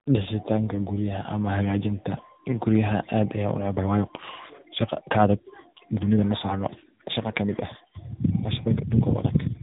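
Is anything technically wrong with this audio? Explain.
Yes, there are two faults.

Tandem speech coding, throughout: the call passed through two speech codecs in a row, the last sounding like narrowband AMR, so each recoded the previous one's damage. The result is rough, muffled, warbly speech with nothing above 3.8 kHz.

Time-stretched section, from 3.73 s to the end: the pace abruptly jumps to about 1.42 times normal while pitch stays fixed, sounding rushed, likely from software dropping short pieces to shorten the audio.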